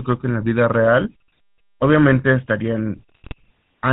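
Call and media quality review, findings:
GSM full-rate codec, throughout: buzzy, gravelly speech roughness, band cut above 4 kHz; regular-pulse excitation and vocal-tract model, consistent with a 13 kbps full-rate link.

GSM bit errors, 3.09 to 3.34 s: squawks and gargling bursts; corrupted filter, pitch or gain parameters distort spectrum and level per frame, suggesting a weak radio link.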